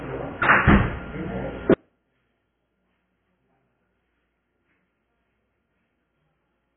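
From the start, the sound is dull and smeared. Nothing reaches above 3.8 kHz, so the top of the spectrum is gone. Sustained parts carry a warbling, fizzy texture. The damage is heavy. It points to AAC compression, likely AAC-LC at a very low rate, around 16 kbps. At that rate the encoder cuts the bandwidth hard. It also leaves holes in the spectrum and patches them coarsely. The result is this murky, watery character.

At 1.74 s the level collapses by about 38 dB and stays down until the end. What remains is faint, like a ghost of the sound. This drop fits one channel inverted. One stereo channel has flipped polarity, so anything common to both cancels when they are summed to mono. Only the small difference between the channels survives. That is why the sound nearly disappears instead of simply getting quieter.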